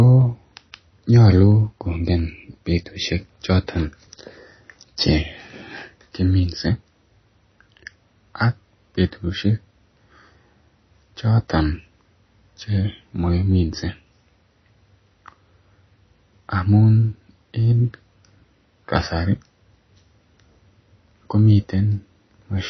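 From start to finish the speech carries plainly audible damage that is most likely MP3 compression at a low rate, which fits around 24 kbps. Nothing sounds above about 6 kHz, so s sounds lose their edge, and weak detail flickers in and out between frames, giving a watery, swirly texture with smeared attacks. That frame-to-frame warbling is what sets it apart from a simple low-pass filter, which would dull the top without the swirl.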